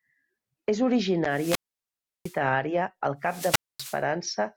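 Two wireless microphone squelch dropouts occur. From 1.29 to 2.40 s, the radio signal fades, hiss rises, and the receiver's squelch mutes the speech for about 0.70 s before "àrea al". After "àrea al", from 3.22 to 4.03 s, it recurs with a 0.24 s hole.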